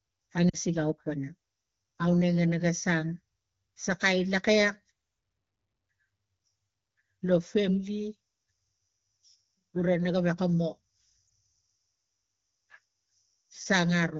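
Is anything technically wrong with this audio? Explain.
Yes, there are lost AMR speech frames in two places. The first runs from about 0.49 to 0.56 s, a gap of roughly 40 ms that fits two dropped 20 ms frames. The second is a single short hit at 11.28 s, right after "gewek ga mo". When a frame fails its checksum, the AMR decoder fills in by repeating the last good pitch and vocal tract settings at a lower gain. So you hear a brief smeared dip or warble, and the voice comes back a touch rough. This is running over the AMR wideband (HD Voice) codec, which sounds like it's at one of the higher rates, so the speech itself is only lightly coloured.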